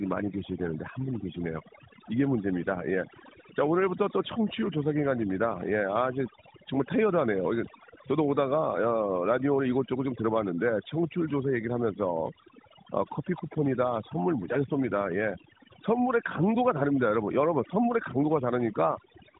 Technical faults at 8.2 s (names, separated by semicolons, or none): overdone noise removal